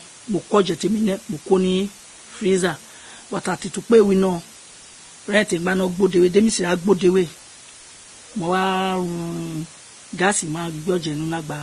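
Speech, reduced throughout to a very short word length with dither added before rounding, a case of low bit depth with dither that points to about 7 bits. The rounding error becomes a steady, even white hiss sitting roughly 25 dB below the speech, with no distortion. The clip was likely passed through a chain of lossy codecs, with transcoding between lossy codecs consistent with a Vorbis pass and then Opus, both near 30 kbit/s. The band stops at 12.1 kHz, and the artefacts of both codecs are heard together throughout.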